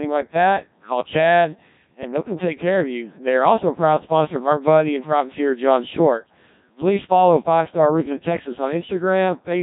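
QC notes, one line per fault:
Throughout: Codec 2 vocoder. The speech has the robotic, buzzy quality of a very low-rate digital-radio vocoder, with heavy damage consistent with a setting around 1.3 kbit/s. Only pitch, voicing, energy and a coarse spectral envelope survive; the decoder rebuilds the voice from sine waves rather than the original waveform, so natural texture is lost. Nothing is present above 3.8 kHz, leaving the sound narrow and dull.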